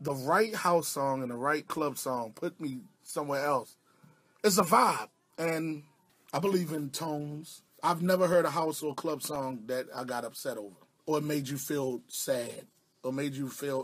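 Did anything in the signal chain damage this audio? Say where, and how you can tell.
Yes. Between 8.33 and 9.61 s there are six quick ticks, each a few milliseconds long at most, spaced evenly at roughly five a second. That's CD scratch ticks, damage at the storage and playback stage. A scratch on the disc wipes out more data than error correction can rebuild, and that happens on every turn. The player then fills in or mutes the lost samples, which gives that regular, clock-like ticking over the sound.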